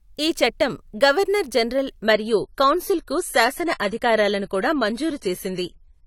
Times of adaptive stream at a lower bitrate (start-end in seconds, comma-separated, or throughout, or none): 2.03-6.06